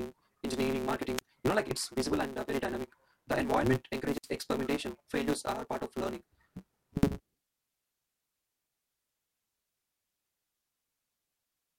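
From start to finish the speech carries a block size mismatch (truncated). One stage writes longer blocks than the next stage reads, so the tail of every block is discarded. The steady periodic cut produces a buzz at 138 Hz, and dropping that material makes the speech run 1.6 times faster while keeping its timbre. The buzz rate and speed-up fit a writer producing 512-sample blocks.

At 1.17 to 1.21 s there is a wireless microphone squelch dropout. The FM radio link fades far enough that the receiver's squelch closes. A short lift of hiss leads into a hole of near silence lasting 39 ms before the speech returns. A second, longer dropout runs from 4.09 to 4.30 s. The same rise of static precedes a muted gap of 93 ms, after which the signal recovers.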